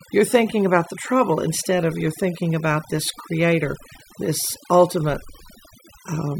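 Throughout the speech, overdone noise removal clamps individual frequency bands whenever they sit close to the estimated noise floor. The background drops to near silence sprinkled with twinkling specks. Unlike a noise gate, it works band by band rather than muting everything at once.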